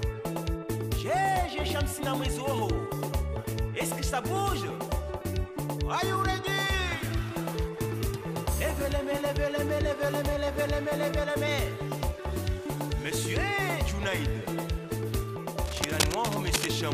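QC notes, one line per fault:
15.64–16.69 s, cable scratch noise: dense, uneven scratching and rustling sits just below the sound for about a second, likely a worn cable or connector moved, its contact resistance flickering.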